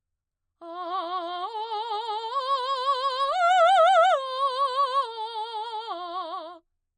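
From start to finish the music sounds dull and watery, with nothing above about 9.1 kHz. That points to MP3 compression, likely at a low bitrate around 40 kbps.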